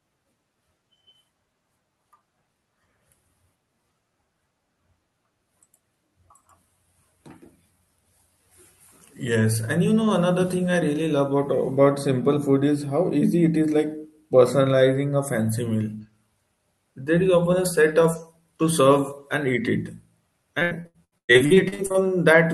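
From 20.59 s to 21.96 s, near the end of the speech, repeated packet loss (robotic sound) sets in. The sound breaks into a rapid chain of short holes, the longest about 110 ms, which points to 14 separate losses. Each hole is bridged by stretching the preceding sound, so nearly half this stretch is synthetic fill, giving a choppy, robotic texture. Unlike a single dropout, the damage repeats in quick succession rather than leaving one isolated gap.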